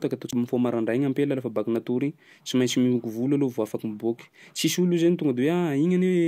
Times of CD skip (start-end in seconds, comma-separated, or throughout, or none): 0.31